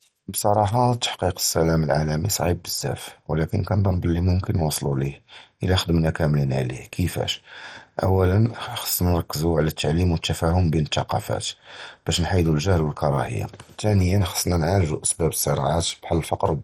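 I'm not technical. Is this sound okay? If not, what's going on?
No, not quite. All the way through, the speech sounds dull and a bit gurgly and grainy, like a weak digital radio station. That's most likely heavy MP2 compression: it squeezes the file so hard that the top end drops out and what's left gets coarse.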